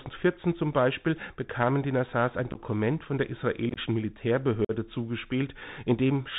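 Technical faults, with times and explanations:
throughout, Bluetooth CVSD headset codec: 64 kbit/s one-bit up/down coding with an adapting step removes everything above 4 kHz, leaving scratchy sibilants, overload distortion and granular hiss.
2.51–2.60 s, 3.69–3.78 s and 4.65–4.71 s, unconcealed Bluetooth headset packet loss: 30 to 49 ms of lost packets per cluster leave abrupt silent holes (just before "von der", just after "von der"), and the speech returns briefly quieter.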